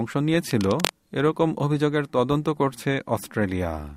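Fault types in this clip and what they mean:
Cable scratch noise: from 0.51 to 0.93 s, dense, uneven bursts of scratching and rustling sit over the speech at nearly its own level. This is likely a worn cable or connector being moved, its contact resistance flickering rapidly and injecting noise into the signal.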